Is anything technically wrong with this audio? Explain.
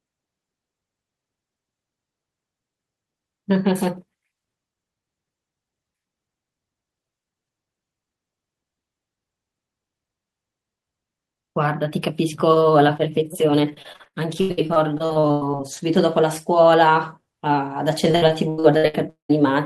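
Yes. Repeated packet loss (robotic sound) affects this speech twice, from 13.73 to 15.61 s and from 18.11 to 19.31 s. Packets kept going missing. Each gap was filled by stretching the last sound, covering about a third, then nearly half, of each stretch. The speech turns choppy, with pieces missing.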